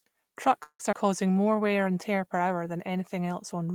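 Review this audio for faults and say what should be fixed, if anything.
Call audio freeze at 0.63 to 0.81 s: the last sound is stretched into a fading buzz, then about 80 ms of silence. The 160 ms gap is filled but no audio is lost, which sets it apart from a skip. The likely cause is delayed packets draining the jitter buffer. A larger minimum jitter-buffer depth or better network prioritisation would prevent this.

Skip ahead at 0.91 to 0.94 s: roughly 70 ms of audio is dropped, and the two sides are joined with only about 10 ms of fill. Unlike a freeze, sound is missing rather than paused. Gentler buffer trimming that cuts only pauses would prevent this.

Jitter buffer slow-down from 1.31 to 1.68 s: repeated pitch periods add 53 ms, so the sound plays at 87% speed with unchanged pitch. There is no gap, unlike a freeze. Rebuilding the buffer reserve more gradually or during pauses would prevent this.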